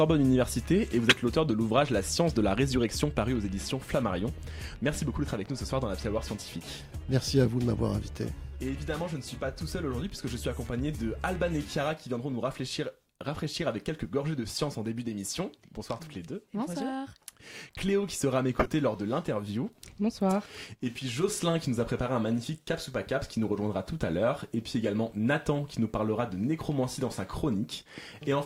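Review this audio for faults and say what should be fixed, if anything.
Two short bursts come from a corrupt frame decoded. The first runs from 1.08 to 1.16 s, its error peaking around -5 dBFS. The second runs from 18.57 to 18.68 s, peaking around -10 dBFS, about 5 dB lower. Damaged bits inside compressed frames were played anyway. Misread gains and codes placed energy at wrong frequencies. The first burst spans about two damaged frames, the second about five. To prevent this, validate frame checksums and conceal any frame that fails.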